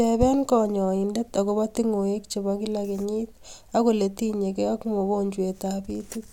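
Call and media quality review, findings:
No technical faults were found in the speech signal, and level, continuity and timing show nothing that calls for a component-level follow-up.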